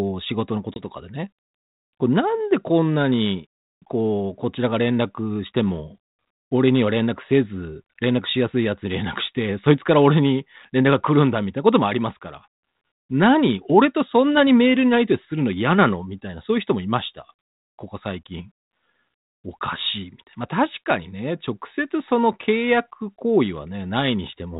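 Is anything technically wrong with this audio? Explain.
Yes, there's one brief glitch early on. At about 0.74 s there's packet loss on the ADPCM call: roughly one packet, a 20 ms hole, drops out and gets filled with silence, so you hear a hard-edged gap. Because ADPCM codes each sample as a difference from an adaptive prediction, the decoder's predictor and step size lose sync with the sender's. The speech comes back slightly distorted, and it has settled again by about 0.83 s. The underlying 32 kbit/s G.726 coding itself only adds light damage.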